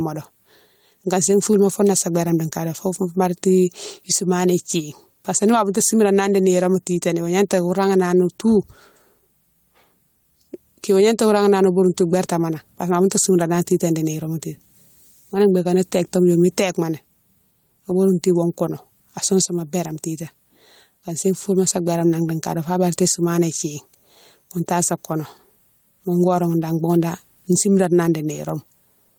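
Gain pumping runs through the whole speech recording. The input gain was likely set far too high, so a fast limiter or compressor clamps down on each loud syllable and releases in the pauses, swinging the level by around 10 dB. Loud and soft parts sit closer in level, and the voice sounds squashed. On the waveform, the peaks sit at an even level.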